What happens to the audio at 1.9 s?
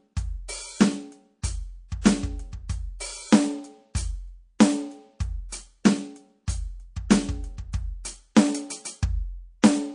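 A short burst of hiss smears in ahead of the attack from 1.88 to 1.92 s, about 19 dB above the quiet before it, so the hit sounds soft. This is pre-echo: the encoder stayed on long blocks of about 52 ms, never switching to short ones, and the noise meant for the loud attack spread back over roughly 33 ms. Throughout this music the sound is watery, with swirling, metallic detail. That plainly audible damage is likely MP3 compression at a low bitrate, consistent with roughly 40 kbps.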